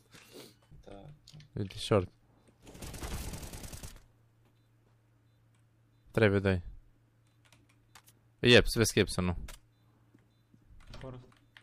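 No technical faults are audible.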